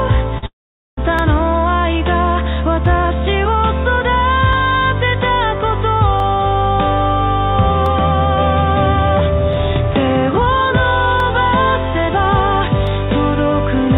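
The audio passes through a G.711 mu-law call path with nothing above 4 kHz. At 0.38 to 0.44 s, short concealed packet loss leaves a brief smear where about 40 ms was patched, too short to leave any silence. A long network dropout is the likely cause of the gap from 0.46 to 0.99 s: an extended fading continuation decays into roughly 450 ms of silence before the sound returns. From 1.19 to 12.87 s, a regular click recurs every 1.67 s, about seven times. These are clock drift buffer slips, likely from a clock error near 100 ppm dropping or repeating a handful of samples each time, and their steady spacing sets them apart from the random loss earlier in the clip.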